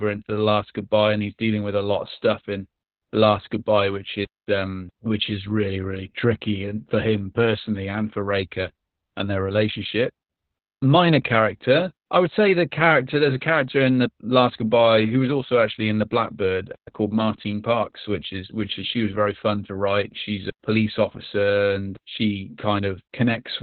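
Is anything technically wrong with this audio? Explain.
Yes, the whole clip shows Opus voice compression, and heavily. The codec has dropped everything above about 4.4 kHz and coded the speech coarsely in SILK, which fits roughly an 8 kbps setting. The result sounds muffled, hoarse and a bit robotic throughout.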